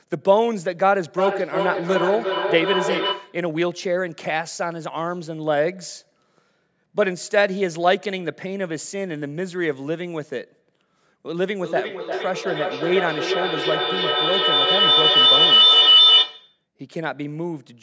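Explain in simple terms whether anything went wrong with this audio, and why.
Two things went wrong. From 1.18 to 3.49 s there's feedback echo between two devices: the speech comes back roughly every 0.4 s, nearly as loud as the original, because a second nearby device replays it into the microphone. Then from 11.4 to 16.64 s that same loop turns into a feedback howl, building on every 0.4 s trip into a loud, high-pitched whine around 3 kHz that drowns out the speech.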